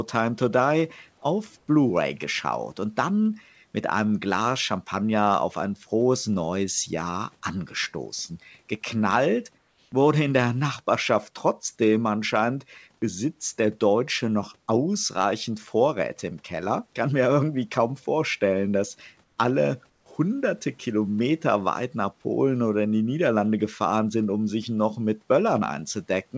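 In the pauses at 1.58–1.68, 9.58–9.92, 19.24–19.38 and 19.90–20.06 s, the real background turns into a flat, featureless hiss, about 2 to 5 dB quieter. That's comfort noise in place of the background, likely from discontinuous transmission, with the receiver synthesizing noise while the sender stays quiet.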